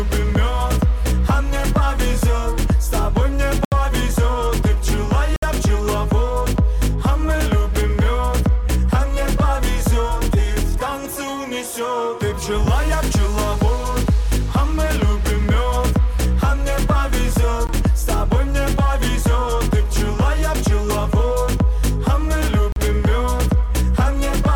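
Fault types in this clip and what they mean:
Bluetooth stall: The sound drops to silence and then resumes at 3.65 s (72 ms), 5.36 s (63 ms), 17.67 s (18 ms) and 22.72 s (38 ms). Likely interference delayed packets, so the headphone buffer ran dry until they arrived.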